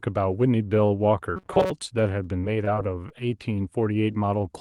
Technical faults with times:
1.36-1.71 robotic sound from repeated short buffers
2.23-3.12 repeated packet loss (robotic sound)

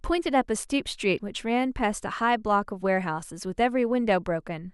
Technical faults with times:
1.14-1.19 damaged data in a compressed stream

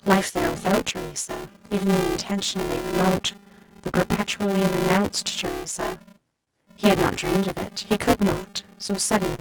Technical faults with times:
0.00-9.40 buffer tearing
0.00-9.40 clock drift between sender and receiver
0.46-8.92 repeated timing corrections
6.44-6.49 short stall from a late packet
9.35-9.40 short stall from a late packet

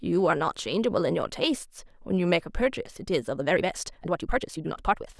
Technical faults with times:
3.32-5.20 time-stretched section

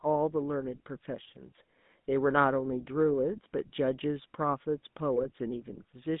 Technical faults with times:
0.00-6.20 GSM full-rate codec
5.16-5.25 GSM bit errors

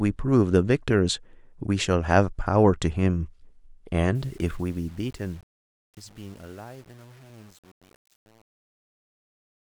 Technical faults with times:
4.15-9.62 truncation distortion on a fade

